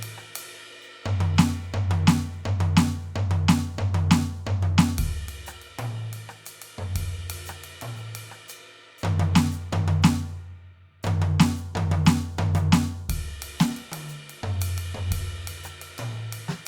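No technical faults are audible anywhere in the music.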